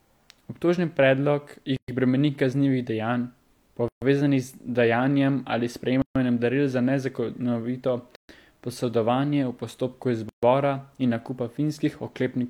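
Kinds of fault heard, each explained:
Gap at a join of encoded pieces: at 1.76, 3.88, 6.02, 8.16 and 10.29 s, the speech drops into silence for 118 ms, then 136 ms each time, every 2 s, as separately encoded pieces keep their encoder's start delay and padded last frame.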